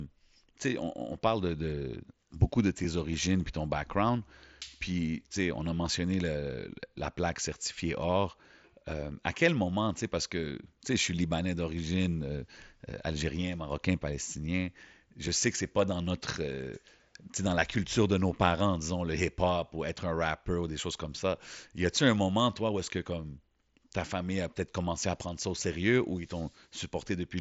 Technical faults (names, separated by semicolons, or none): dropped buffer (overrun)